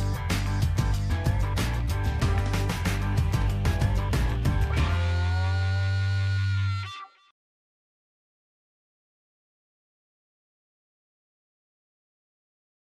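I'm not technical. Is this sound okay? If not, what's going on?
Yes, nothing wrong can be heard in this sound.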